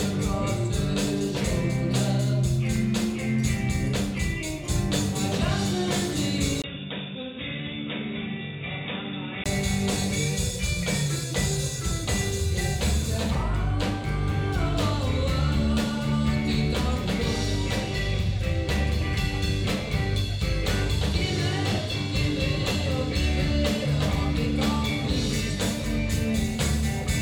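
An input switched to a poorer device from 6.62 to 9.46 s, most likely a change to a different microphone or a headset's call profile. A 20 ms gap marks the switch, after which nothing remains above 3.8 kHz, so the sound turns dull and boxy. The level drops by about 5 dB, and a faint new background noise sits far below the signal. At 9.46 s the full band returns and the sound clears again.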